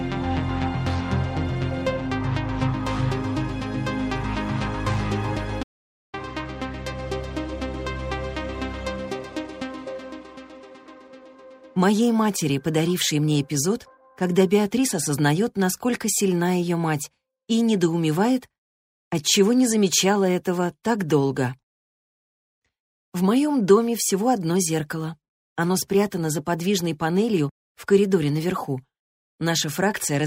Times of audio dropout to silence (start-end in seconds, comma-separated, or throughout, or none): 5.63-6.14